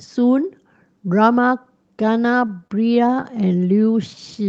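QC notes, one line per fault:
2.47–3.53 s, repeated stalls (stutter): eleven brief holds, none longer than 25 ms, drag the audio by 122 ms in all as the jitter buffer runs dry and the last sound is extended. Nothing goes missing. The spectrogram shows short frozen, smeared streaks below the 8 kHz cut-off.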